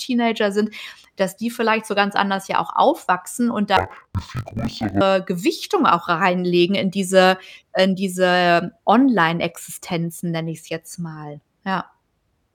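In this speech clip, interleaved audio was read as planar from 3.77 to 5.03 s, just after "ja auch aufwachsen und". Blocks of 20 ms had their alternating left-right samples split into halves, so each channel plays at half speed, dropping an octave, dull and robotic, buzzing at 50 Hz.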